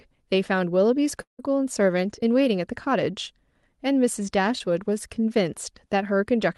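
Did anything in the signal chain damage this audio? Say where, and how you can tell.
Yes. From 1.21 to 1.41 s the sound stretches into a fading buzz, then goes silent for about 0.13 s before resuming with material missing. This is likely a long network dropout; unlike brief concealment, it decays to silence.

At 4.59 to 4.62 s there is a short concealed packet loss: a brief smear where the receiver filled about 10 ms of 20 ms of lost audio, blending back into the real audio.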